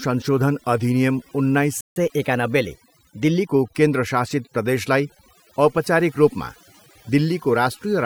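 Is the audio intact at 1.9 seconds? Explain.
No. A playback stall silences the speech from 1.81 to 1.96 s, right after "अधिनियम उन्नाइस". The output drops out for about 0.15 s mid-phrase, likely because the player ran out of buffered data or its thread was blocked, then resumes where it stopped.

Catch-up at higher speed follows from 1.96 to 3.48 s, ending before "केन्द्र शासित प्रदेशलाई औपचारिक". The player works through its backlog at 1.1 times normal speed, so the speech runs faster and sits about one and a half semitones higher.

Overdone noise removal also affects that moment, as it does the whole clip. A heavy-handed noise reducer cuts individual frequency bands whenever they resemble its noise estimate. This leaves the background lower and broken up into twinkling, warbling specks.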